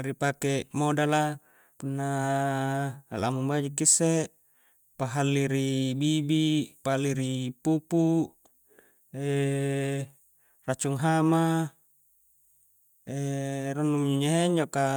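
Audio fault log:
No fault found in this speech clip.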